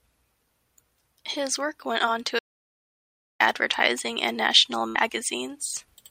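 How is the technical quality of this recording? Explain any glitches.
The recording has two glitches, both interruptions to the speech.

From 2.39 to 3.40 s there is an audio dropout to silence: the speech cuts off abruptly and about 1.01 s of dead silence follows, with no room tone at all. The likely cause is a lost input, such as a disconnected device or a brief mute, while the recorder kept writing silence, so that stretch of speech is gone.

At 4.88 to 4.96 s a burst of packet loss sounds like a short held sound that fades before the speech jumps forward. The receiver stretched the last sound over about 65 ms while turning it down. When the audio resumes, roughly 60 ms of speech is missing.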